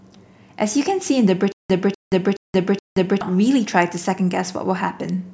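Speech, with a stutter with silent gaps from 1.52 s to 3.21 s: a fragment of about 247 ms plays four times, each repeat followed by roughly 175 ms of digital silence, giving an even 422.5 ms cycle. The likely cause is a stalled player or stream that replays its last buffered fragment on each retry and then runs dry. Whatever audio belonged in that span is gone, not just delayed.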